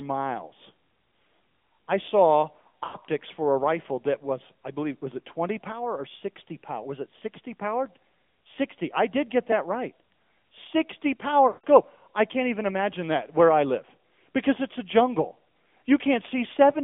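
Throughout, the speech carries AMR narrowband mobile codec damage at roughly 10.2 kbps: a buzzy, synthetic tone, with the spectrogram confined to a band of about 200 Hz to 3.5 kHz.

From 2.62 to 2.97 s, after "I saw" and before "for a rifle that", lost AMR speech frames scatter over about 320 ms, the longest gap 60 ms. The decoder repeats its last settings at falling gain, so the sound warbles and dips, with the waveform showing brief sagging patches.

At 11.48 to 11.65 s, before "I can't even imagine", a solid 160 ms loss, which fits eight 20 ms frames, smears the sound and fades it to near silence, leaving a tapered gap in the waveform.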